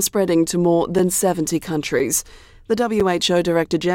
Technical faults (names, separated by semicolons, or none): gap between chunks